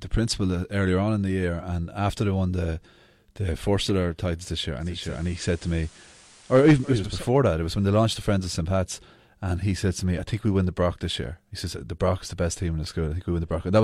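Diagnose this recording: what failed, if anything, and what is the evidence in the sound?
Digital radio blending to analogue, 4.78 to 7.27 s after "titles this year": reception failed and the receiver cross-faded over 440 ms to FM, adding faint hiss about 30 dB below the signal.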